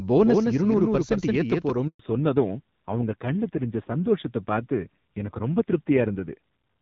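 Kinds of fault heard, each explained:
Doubled audio track: The speech is heard twice, with a second copy trailing roughly 150 ms behind at about 5 dB lower. It has no decay or room colour. It is already running when the clip starts and stops abruptly at 1.7 s, likely from an out-of-step edit or a slower capture path.
Handover gap: Between 1.87 and 1.99 s the speech dies away quickly and goes silent for 120 ms. This is a network handover, where no speech frames arrived while the call switched links. Whatever was said in that gap is lost.
Fallback to narrowband: From 1.99 s to the end, everything above 4 kHz is gone. The speech turns duller and rougher than the clearer HD Voice sound before it. This fits a drop from wideband to a low-rate narrowband codec, around 5.9 kbit/s.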